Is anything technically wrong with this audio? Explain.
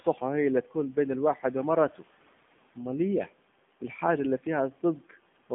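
Yes. Throughout, the speech sounds thin, buzzy and plainly synthetic, with nothing above 3.6 kHz. This is AMR narrowband mobile codec damage: a vocal-tract model driven by sparse pulses, consistent with a low bitrate around 7.4 kbps, rebuilds the voice within a telephone band of roughly 150 Hz to 3.5 kHz. The room noise, about 24 dB below the speech, comes through the same narrow band.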